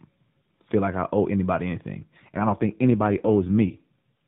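Speech carried over the AMR narrowband mobile codec, band-limited below 4 kHz. From 2.00 to 3.99 s, just after "like I owe anybody", an AMR rate drop makes the voice rougher and more synthetic with no gap, which fits a fall from 12.2 to 5.9 kbps.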